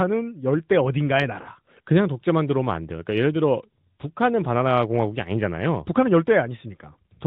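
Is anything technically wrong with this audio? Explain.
Yes, there's one glitch: lost AMR speech frames at 1.42 to 1.49 s. A gap of about 40 ms, fitting two 20 ms frames, failed to decode. The decoder patched it by reusing the last good pitch and vocal tract settings with falling gain, so the sound is drawn out and fading in the narrowband speech, and the voice comes back weak or rough for a moment.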